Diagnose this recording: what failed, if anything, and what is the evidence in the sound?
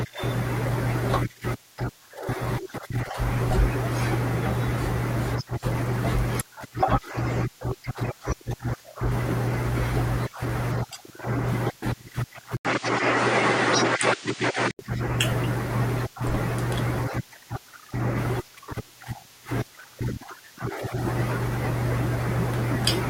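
After an 80 ms silence at 12.57 s, the speech loses everything above 9.4 kHz until 14.79 s, shifts level by around 5 dB and carries a new noise floor roughly 30 dB down. Driver stage: input likely switched to a poorer device, narrower-band and noisier.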